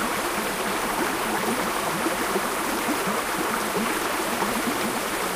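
Nothing goes wrong technically in this short stretch of everyday sound; there's simply nothing here that needs pointing out.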